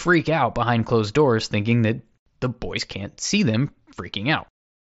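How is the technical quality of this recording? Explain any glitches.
There's one small glitch, and it sits inside a Bluetooth headset link carrying the mSBC codec at around 61 kbps, which keeps the sound limited to 8 kHz with a faint graininess on louder moments. Right after "the boys can't see", at 3.53 s, there's a concealed Bluetooth headset packet loss. About 7.5 ms of audio went missing between headset and phone, which fits a single dropped frame. The receiver patched the gap by repeating the best-matching piece of the waveform just before it, so you get only a barely noticeable hiccup.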